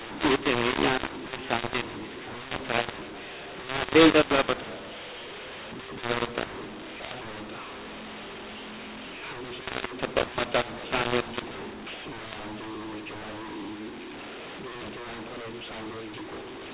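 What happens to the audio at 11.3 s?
At 11.3 s the speech still carries the mu-law and A-law mix-up present throughout: mu-law samples decoded as A-law scramble levels, giving harsh distortion and noise-filled pauses.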